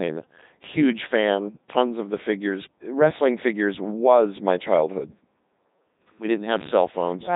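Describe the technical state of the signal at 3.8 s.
At 3.8 s the speech sounds robotic and buzzy, dull and band-limited, with nothing above about 3.8 kHz. The same heavy damage runs through the whole clip. This is the Codec 2 vocoder, and the quality fits its highest 3.2 kbit/s mode. The voice is not carried as a waveform at all. Only pitch, voicing, energy and a coarse spectral envelope survive, and the decoder rebuilds the sound from sine waves, which produces the synthetic, mechanical timbre.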